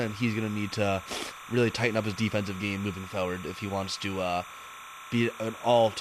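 Timecode bleed runs under the speech from start to finish. Linear timecode from a nearby track or cable has leaked in. Its square wave flips between tones near 1 and 2 kHz at 29.97 frames per second. It sits roughly 15 dB down as a steady chirping warble.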